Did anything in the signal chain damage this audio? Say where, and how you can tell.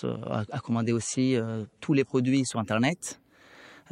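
Yes, at the codec and playback stage: this is an adaptive stream starting at a low bitrate. From 0.0 to 2.5 s the speech sounds dull and swirly, with nothing above 11.2 kHz and stronger codec artefacts, which fits an MP3 stream of about 52 kbit/s. At 2.5 s the player, having measured the connection, switches to a better version, consistent with 128 kbit/s, and the treble returns with no gap. On a spectrogram there is a flat ceiling at 11.2 kHz that lifts abruptly at 2.5 s, while the waveform stays continuous.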